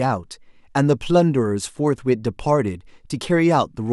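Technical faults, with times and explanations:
No technical faults detected.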